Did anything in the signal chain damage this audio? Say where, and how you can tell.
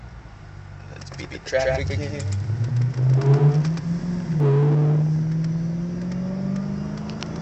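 Yes. From 1.12 s to 4.40 s there is a doubled audio track: a full-band copy trails the original by roughly 150 ms at about equal level, with no decay or room colour, and cuts in and out abruptly. This likely comes from a second, slower capture or routing path mixing the same signal back in.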